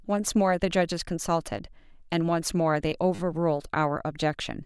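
At 1.58 s there is a repeated buffer. New audio arrived late, so the device played its last block again. That tiny piece of the speech sounds twice, joined hard. It comes across as a brief click. The repeat length fits a 10 ms buffer. A second repeated buffer runs from 3.15 to 3.19 s. The same short block plays four extra times. This gives a short buzz rather than a click. Nothing seems skipped afterwards.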